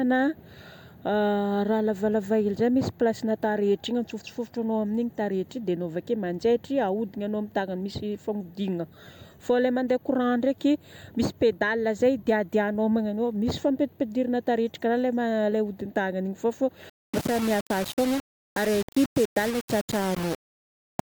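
From 16.90 s to 21.11 s, the speech was likely rounded to very few levels without dither, which fits a 4-bit depth. This is low bit depth without dither. The error tracks the signal at about 15 dB below it, so the speech turns grainy and gritty.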